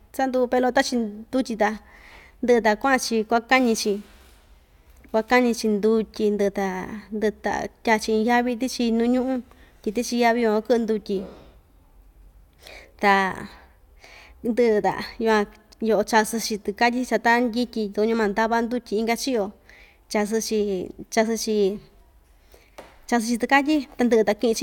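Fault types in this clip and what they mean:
No fault types can be heard in this clip.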